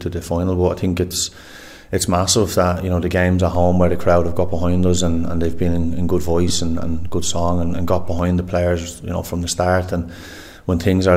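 The audio carries a DC step: at 3.55 s the waveform's zero line jumps to a new offset, heard as a low thump, and the offset holds until 8.19 s, where it steps back with a second thump. The sound itself continues unchanged across both steps, which points to a converter recalibrating or an input with a standing offset being switched in and out. At 6.48 s there are lost LE Audio frames, a gap of about 15 ms, consistent with two LC3 frames dropping out over the Bluetooth link. The decoder fills the hole by repeating the last good spectrum with randomised phase signs, so tonal content briefly turns into a noisy smear instead of a clean dropout. The loss is too short for the concealment's gradual fade toward silence to become audible.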